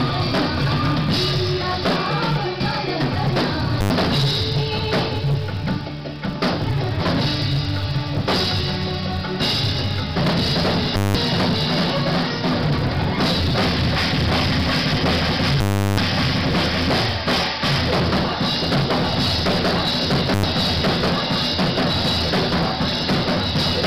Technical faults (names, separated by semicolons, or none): filter restarted on every block; invalid numbers at full scale